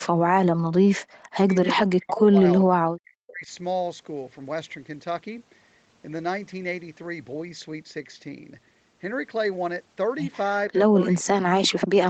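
An echo canceller likely mistook this speech for loudspeaker echo during double talk, so the speech is suppressed in double talk: it dips by up to about 40 dB or cuts out at 0–0.59, 1.23–1.67, 1.95–2.44, 2.6–3.51, 10.9–11.0 and 11.33 s onward.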